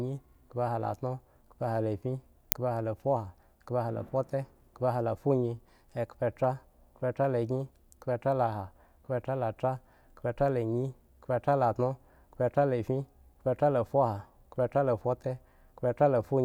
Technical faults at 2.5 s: uninitialised buffer

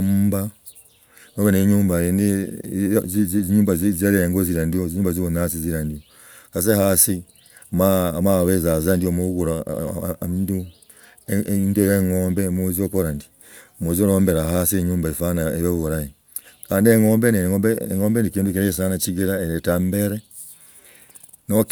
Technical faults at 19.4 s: none

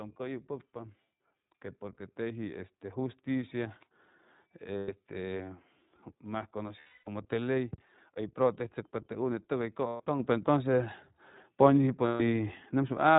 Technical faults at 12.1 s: iLBC codec; lost iLBC frames

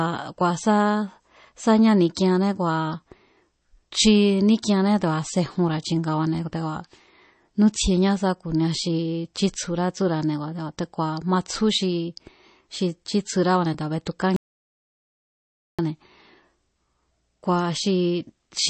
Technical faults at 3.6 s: MP3 compression

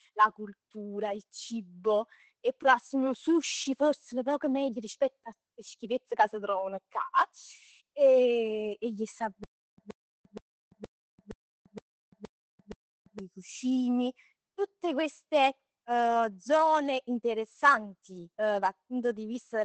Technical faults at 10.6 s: Opus voice compression; stutter with silent gaps

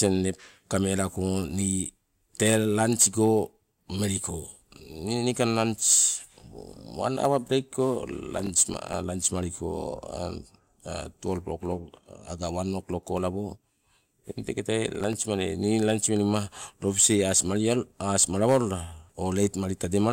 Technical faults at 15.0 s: processor overload crackle

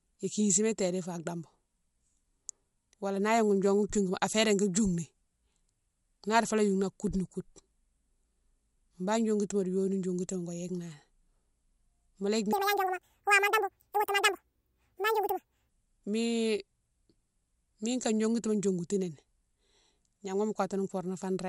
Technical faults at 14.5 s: wrong sample rate

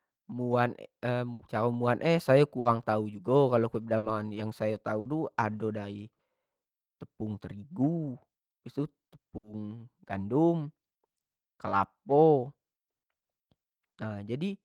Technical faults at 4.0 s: burst of packet loss

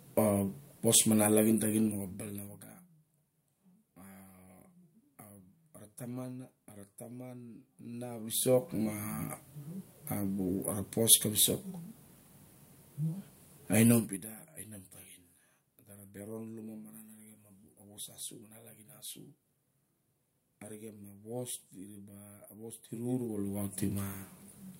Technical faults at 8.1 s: zipper noise

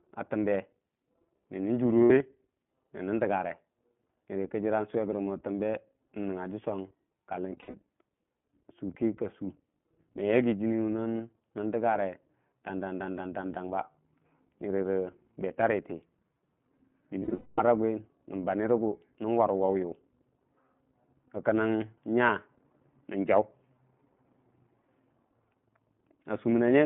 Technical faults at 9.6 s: iLBC codec

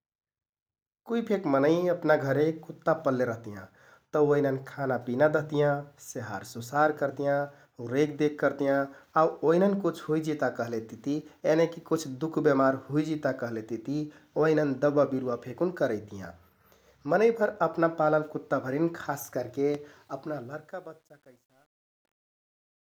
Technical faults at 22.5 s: truncation distortion on a fade

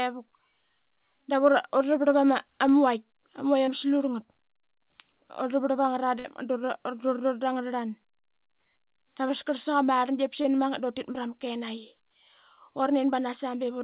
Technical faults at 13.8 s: none

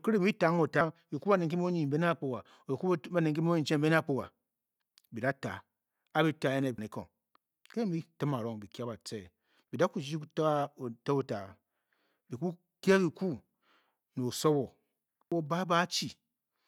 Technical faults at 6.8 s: damaged data in a compressed stream

